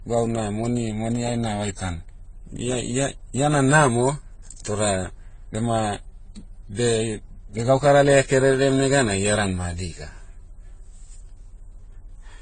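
Throughout, the speech has nothing above 9 kHz, and artefacts from several codecs are heard together. The likely cause is transcoding between lossy codecs, which fits AAC-LC at 32 kbit/s, HE-AAC at 24 kbit/s, then AAC-LC again. Each pass codes earlier artefacts and adds its own.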